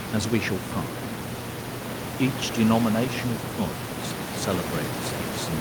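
There are no technical faults to describe in time order; the only background sound is the room noise captured by the microphone, about 7 dB below the speech.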